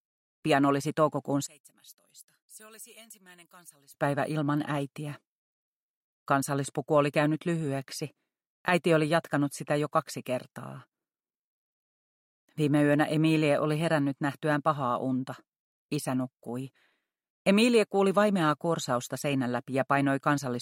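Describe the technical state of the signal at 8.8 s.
At 8.8 s the signal is intact, with no dropout, distortion, glitch or other technical fault to be heard.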